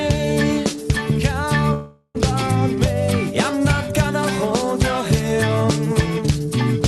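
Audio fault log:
1.73–2.17 s, call audio freeze: sound stalls for about 0.43 s, last sound stretched into a fading buzz or hiss, brief silence at the end. Likely delayed packets, so the sound resumes where it stopped and nothing is skipped.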